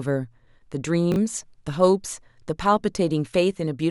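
At 1.12 to 1.16 s, chunks out of order: one 20 ms chunk arrives one chunk late, so two neighbouring chunks swap places. The speech briefly jumbles; the waveform and spectrogram show three abrupt seams where formant tracks jump discontinuously.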